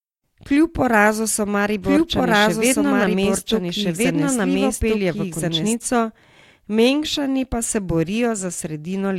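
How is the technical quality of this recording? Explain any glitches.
The recording has one clear glitch, a doubled audio track. From 1.84 to 5.74 s, a second full-band copy of the speech plays about one and a half seconds behind, at roughly equal loudness. This is likely a second capture through a slower path being mixed in. Unlike an echo or reverb, the copy has no decay or room colour, and it starts and stops abruptly.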